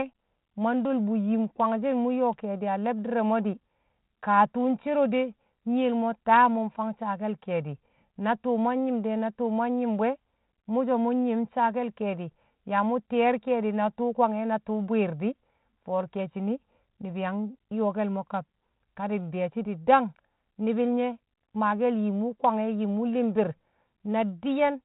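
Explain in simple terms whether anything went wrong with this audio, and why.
Nothing went wrong here: the speech sits in its ordinary state after telephone-style G.726 ADPCM coding, carrying only the light roughness that coding leaves behind, with no fault anywhere in the signal.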